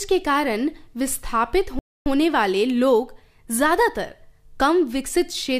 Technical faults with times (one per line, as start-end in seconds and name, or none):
1.79-2.06 rebuffering stall